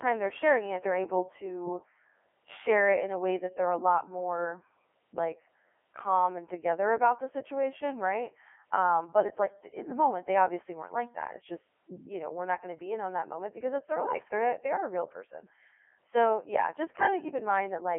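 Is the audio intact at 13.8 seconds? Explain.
No. At 13.8 s the sound has passed through a Codec 2 vocoder, as it has for the whole clip. The vocoder sends only pitch, voicing, energy and spectral shape, which fits its 3.2 kbit/s mode. The decoder rebuilds the speech from sine waves, so it comes out robotic and buzzy. It is confined to a 300 to 3400 Hz line band, with nothing above 3.5 kHz.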